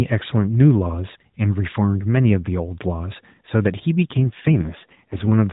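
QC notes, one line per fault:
4.07–5.32 s, AMR rate drop: across the last stretch of this narrowband speech the voice turns rougher, buzzier and more synthetic, which points to the codec stepping down from about 12.2 kbps to about 4.75 kbps as the link weakened. With fewer bits left to model the vocal tract and its pulses, the detail thins out. Unlike packet loss or a dropout, there is no gap and the band stays the same, still cut off at 4 kHz.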